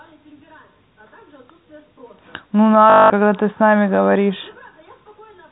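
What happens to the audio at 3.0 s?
Around 3.0 s there's packet loss with the last packet repeated, running 2.9 to 3.1 s. For that 200 ms the receiver just replays the final good chunk, so you get a robotic stutter buzzing at about 50 Hz, which fits 20 ms packets.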